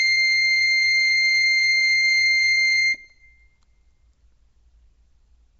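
Throughout the music, the audio has likely been through Nellymoser compression at a low bitrate, perhaps near 32 kbps. Weak bands got no bits and were filled with noise, leaving a rough, hissy, smeared sound with nothing above 7.7 kHz.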